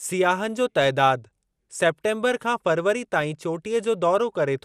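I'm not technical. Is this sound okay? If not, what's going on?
No. Through the whole clip the speech sounds dull and clearly gurgly, with a grainy roughness and nothing above about 15 kHz. That points most likely to MP2 compression, which shuts off upper bands and coarsens the rest, unlike plain muffling, which sounds dull but stays clean.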